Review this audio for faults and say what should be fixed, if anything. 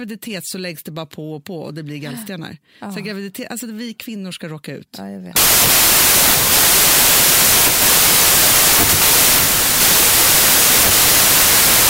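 From 5.36 s to the end of the clip, the speech collapses into loud broadband noise with the original voice buried underneath, running at about two-thirds speed and correspondingly lower in pitch. This is a wrong sample width fault. The 2:3 ratio fits packed 24-bit samples being read as 16-bit: byte boundaries no longer line up, so many values are built from mismatched bytes, and only some keep the true high-order bits. To prevent it, carry the sample format explicitly in the file header or stream metadata and verify it at every read and conversion stage.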